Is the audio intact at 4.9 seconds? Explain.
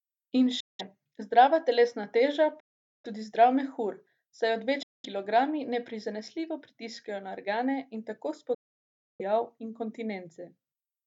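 No. The speech drops out completely from 4.83 to 5.05 s, a gap of about 209 ms. This is a Bluetooth dropout, likely from packets arriving too late and being discarded. The silence starts and stops abruptly or with a fade of a few milliseconds. Speech resumes further along, as though it kept playing.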